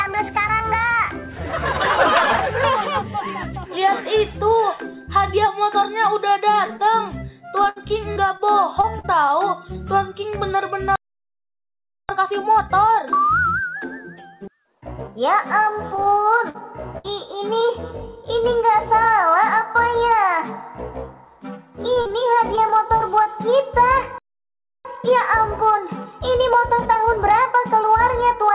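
From 7.64 to 9.06 s there is repeated packet loss, giving a robotic sound: eight short holes, the longest about 66 ms, each patched by stretching the preceding sound. About 17% of that stretch is concealment, so the audio turns choppy and robotic. The sound is also band-limited with nothing above 4 kHz, consistent with a G.711 call path at 64 kbps.

At 10.96 s a playback stall silences the output for 1.13 s, most likely because the player's buffer ran dry before data arrived. The sound cuts off mid-flow and resumes at 12.09 s.

From 12.09 to 15.09 s comes a time-compressed catch-up. The player trims its backlog by removing small segments and cross-fading the joins, so the audio runs about 1.25 times faster at unchanged pitch.

Repeated packet loss returns from 15.96 to 17.06 s, with four gaps, the longest about 58 ms, and about 13% of the span concealed. It returns again from 21.94 to 23.27 s, with seven gaps, the longest about 38 ms, and about 10% concealed. 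Both passages have the same choppy, synthetic texture.

A second playback stall at 24.18 s drops the sound for 0.67 s. A second time-compressed catch-up from 24.85 to 27.85 s follows at about 1.15 times speed. It is slightly less hurried than the first.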